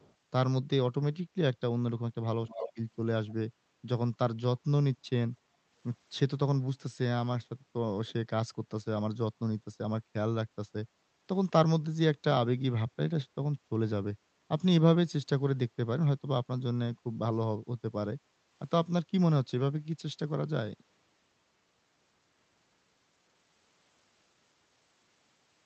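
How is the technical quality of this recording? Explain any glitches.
The recording has two kinds of glitch: brief echo leaks and short dips in the room sound. Both come from the echo handling on the far end of the call, heard through a codec that limits the audio to about 8 kHz.

Echo leak, at 0.0 to 0.14 s, 2.48 to 2.71 s and 3.29 to 3.34 s: a loudspeaker's echo canceller likely let some of its microphone pickup through, returning a copy 271 ms late. It is faint at the start and end, about 35 dB below the speech, but much stronger at 2.5 s, about 10 dB below the speech.

Background gated by the echo canceller, at 5.46 to 5.71 s and 18.19 to 18.5 s: while the loudspeaker played, the canceller pulled the microphone down hard. The room sound drops by about 7 dB for roughly a fifth to a third of a second, then returns.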